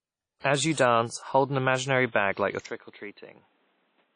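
Speech, with plainly audible codec damage the whole way through: a washy, ringing texture and nothing above about 10.1 kHz, likely WMA compression at a low bitrate around 32 kbps. At 2.66 s it cuts straight over, with no gap, to a duller sound band-limited at 4.2 kHz, roughly 10 dB quieter and carrying its own low noise floor. That's likely the input switched to a poorer device.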